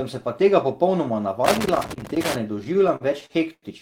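From 1.45 s to 2.38 s the speech is broken up by loose connector crackle, an irregular burst of crackle and scratching. A worn or dirty contact is making and breaking as it shifts, so the signal is chopped on and off, and any DC on the line turns each reconnection into a pop. Unlike digital clicks or codec glitches, the spacing and loudness are ragged and gritty, with no regular rhythm.

From 2.59 s to 3.65 s comes a run of repeated stalls (stutter): nine separate hesitations, the longest about 87 ms, together stretching the audio by about 230 ms, roughly a fifth of that stretch. Packets were arriving late, so the jitter buffer kept running dry and the receiver held the last sound until more arrived. What separates this from dropouts is that nothing is lost. The speech drags and hiccups but stays complete.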